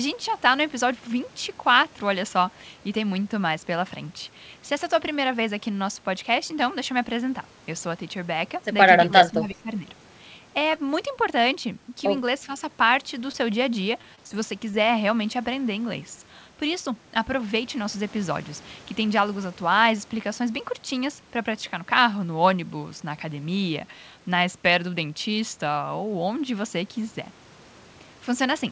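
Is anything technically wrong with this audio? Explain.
Yes. The audio has four kinds of fault, all between about 9 and 15 seconds, heard through a call path whose band stops at 8 kHz.

Speech suppressed in double talk, 9.06 to 9.71 s: the level sags by about 10 dB in pieces, adding up to around half a second of affected sound. The likely cause is an echo canceller that faced simultaneous talk from both ends, could not separate the near talker from the loudspeaker's echo, and pulled down everything.

Echo leak, 9.51 to 9.55 s: a very faint, delayed copy of the sound, about 40 dB below the main level, arrives roughly 0.36 s behind the original. It likely comes from a far end playing the call on a loudspeaker, where the echo canceller left a residue of what its microphone picked up and sent it back down the line.

Short concealed packet loss, 13.32 to 13.35 s and 14.71 to 14.82 s: each time about 20 ms of audio failed to reach the decoder, and the receiver covered the hole with roughly 15 ms of extrapolated sound continuing the preceding pitch or noise before blending back into the real signal. 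The result is a brief smear or wobble. The second event also stretches the timing by about 10 ms.

Repeated packet loss (robotic sound), 14.01 to 14.35 s: four gaps come close together, the longest about 30 ms, totalling around 80 ms missing. Concealment fills about a quarter of this stretch. Because each patch is followed almost at once by another loss, the concealed sound never settles, and the passage turns choppy, with fragments missing.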